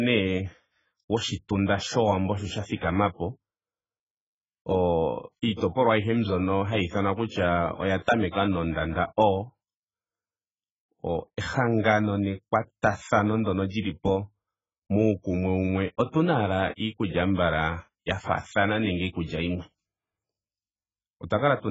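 From start to finish the speech stops dead at 7.6 kHz and sounds dull and smeared, with fizzy, warbling sibilants and vowels. The likely cause is heavy AAC compression, with damage that points to AAC-LC near 12 kbps starving the spectrum of bits.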